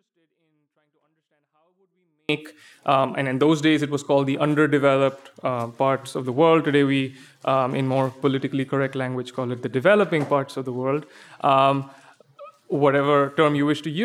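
From the start to 2.29 s the audio plays clean but about 48 dB too quiet, a 24-bit alignment error: 24-bit samples sitting in 32-bit words were read as full 32-bit values.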